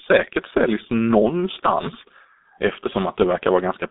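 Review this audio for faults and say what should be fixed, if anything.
Throughout the speech, the G.723.1 codec leaves a muffled, hoarse sound with smeared consonants. The spectrum ends sharply at about 3.8 kHz, and the line band runs from roughly 250 Hz to 3.7 kHz. Heavy coding at a rate that fits a 6.3 kbit/s setting rebuilds the voice from a coarse model refreshed every 30 ms frame. On a spectrogram this shows as empty space above the cutoff, blurred harmonics and fricatives that dissolve into mush. To prevent it, carry the call over a wideband codec at a higher bitrate instead of G.723.1.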